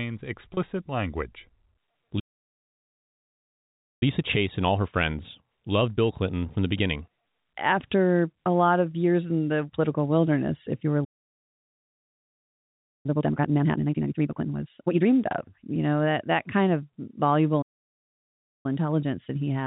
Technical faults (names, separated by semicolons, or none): packet loss with pitch repetition; playback stall; time-compressed catch-up